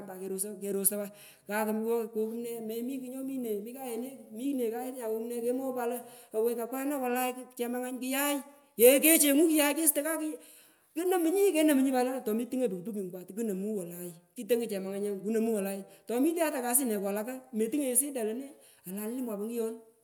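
No technical faults can be heard anywhere in the speech recording. There is nothing to mark at any point in time.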